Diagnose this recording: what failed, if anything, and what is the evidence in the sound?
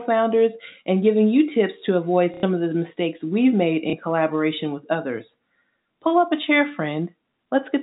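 Packets failed to arrive at the network stage, and the receiver filled each gap by replaying the last packet it had. The speech stutters briefly at 2.34 to 2.43 s (90 ms, which fits three 30 ms packets) and blips at 3.9 to 3.93 s (30 ms, about one packet). Each repeat restarts out of step with the pitch, so the longer gap takes on a robotic buzz, inside the G.711 telephone band that stops at 4 kHz.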